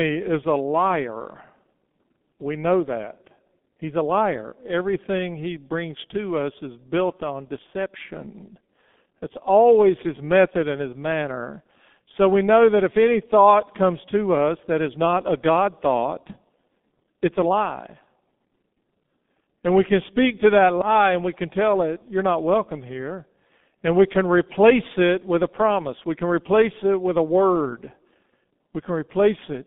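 From start to finish the speech runs through a G.723.1 codec, and it's heavily damaged: everything sits in a narrow 150 Hz to 3.5 kHz band, so it's muffled, while the slow-updating voice model leaves it hoarse with smeared consonants, which fits roughly 6.3 kbit/s.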